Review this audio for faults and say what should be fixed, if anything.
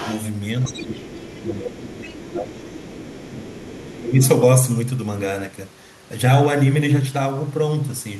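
The echo canceller on the talker's end likely failed to fully remove the far side's loudspeaker playback from the microphone signal, so the other side's voice leaking through is audible underneath the speech from 0.01 to 0.22 s, 0.63 to 1.4 s, 1.91 to 2.32 s, 2.55 to 3.3 s and briefly at 4.24 to 4.28 s. It sits roughly 15 to 25 dB below the main speech, loudest at the very start. A better-converged echo canceller with stronger residual echo suppression, or a headset instead of a loudspeaker, would prevent this.

Where both sides talked at once, the echo canceller likely could not tell the local talker from the loudspeaker echo and attenuated everything, causing speech suppressed in double talk at 0.56 to 1.9 s, 2.11 to 2.56 s and 3.26 to 4.21 s. The speech dips by around 10 dB in the first two stretches and about 15 dB in the third, each affecting a good part of that span. Improving the canceller's double-talk detection so it holds back suppression while the near-end talker is active would prevent this.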